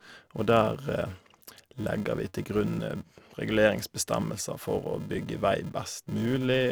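From start to finish, the speech carries a filter restarted on every block. The filter discards its internal state at each block boundary and begins again from silence, so every block opens with a small transient. These arrive at 375 Hz, which fits a 128-sample block, and merge into a steady buzz at that rate rather than separate ticks. The buzz rises and falls with the level of the speech.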